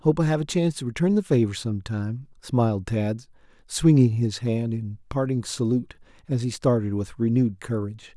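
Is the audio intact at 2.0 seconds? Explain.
Yes, at 2.0 seconds the speech plays through intact, with no dropout, click, distortion or other fault at that moment.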